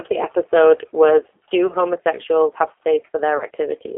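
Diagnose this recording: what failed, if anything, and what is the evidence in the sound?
G.729 codec, throughout, at the codec stage. The speech is confined to a 300 Hz to 3.4 kHz line band at 8 kbit/s and has a plainly rough, synthetic texture, because the decoder rebuilds each frame from a vocal tract filter, a pitch predictor and a few sparse pulses.

VoIP packet loss concealed by the speech codec, a network-stage fault at 1.67 to 1.73 s (between "the episode was" and "homosexuals have") and at 3.37 to 3.44 s. Each gap, about 30 ms of missing audio, points to a single lost packet. The decoder extends its last pitch and filter with falling gain, producing a brief stretched sound that fades, and the voice stays weak or distorted as good frames resume.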